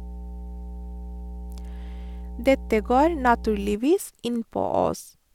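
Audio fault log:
0.00–3.75 s, mains hum: steady 60 Hz tone from power-line coupling, roughly 15 dB below the speech; a flat horizontal line at 60 Hz on the spectrogram, then stops.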